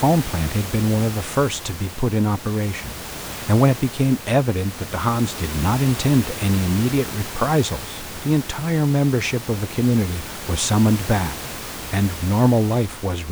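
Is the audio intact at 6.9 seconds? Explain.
Yes, the speech at 6.9 seconds comes through intact, with only the room's own background noise sitting about 13 dB below it.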